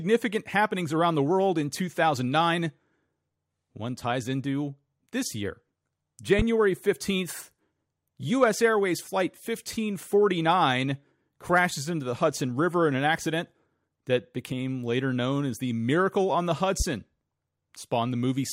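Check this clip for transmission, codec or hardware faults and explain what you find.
Two hardware faults: a loud pop at 6.39 to 6.43 s and another at 16.80 to 16.84 s, just after "on the". Each is a single sharp pop standing about 15 dB and about 10 dB above the speech, which continues underneath. Each is likely a sudden voltage step or pulse from a plug, switch, static or driver glitch entering the signal chain.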